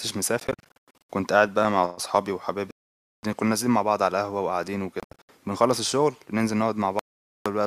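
A speech recording where audio packets were likely failing to reach the headphones in time and being discarded, producing a Bluetooth dropout four times. From 0.40 to 1.08 s and from 5.00 to 5.29 s the sound cuts in and out in short bursts of silence, the longest about 0.1 s and 0.07 s. From 2.71 to 3.23 s and 6.99 to 7.46 s it falls silent for about half a second. Each time the sound returns further on, as if it had kept playing.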